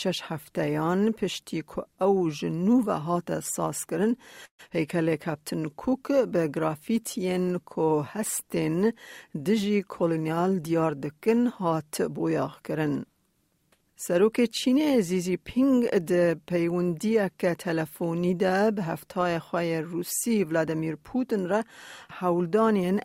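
At 4.45 s the audio stalls for about 0.15 s. The last sound carries on as a fading buzz and then roughly 80 ms of silence, after which playback resumes exactly where it stopped. This is a call audio freeze, most likely packets delayed long enough to empty the jitter buffer. Unlike a skip, it inserts a gap rather than losing anything.

Just after, at 4.69 s, the opposite happens: a skip ahead. Delayed audio arrives while later audio is already queued, so around 70 ms is discarded and the two sides are spliced almost directly. You hear an abrupt jump forward with barely any pause, not a stall.

From 4.96 to 5.62 s a jitter buffer slow-down rebuilds the reserve. Single pitch periods are repeated many times, adding 56 ms and running the sound at 93% speed. Pitch stays put, so sounds seem stretched rather than lower.

From 9.59 to 10.99 s the reverse correction, a jitter buffer speed-up, trims an overfull buffer. 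Around 150 ms is cut in small pitch-period slices, so the audio plays at 109% speed with unchanged pitch. It sounds hurried throughout, with no single audible jump like the earlier skip.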